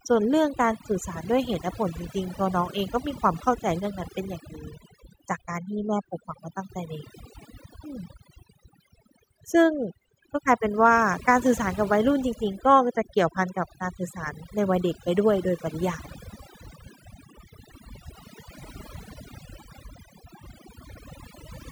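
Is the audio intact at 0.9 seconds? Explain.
No, not really. At 0.9 seconds you're hearing overdone noise removal, and it runs through the whole clip, so that moment is no exception. The noise reduction was pushed way too hard: any frequency band sitting near its guess of the noise floor gets pulled right down or cut out, and the softer parts of the speech get dragged down along with it. So the background collapses into near-silence with little twinkly specks.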